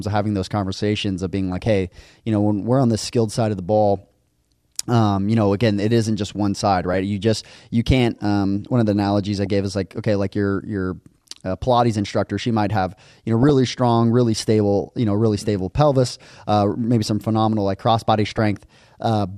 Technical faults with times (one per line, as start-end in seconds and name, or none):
1.52-1.67 DAB burbling
6.93-6.98 DAB burbling
9.05-9.46 DAB burbling
13.43-13.50 DAB burbling
15.94-16.40 DAB burbling
18.24-18.56 DAB burbling